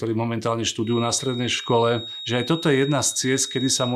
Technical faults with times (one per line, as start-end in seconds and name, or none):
0.80-3.95 feedback whistle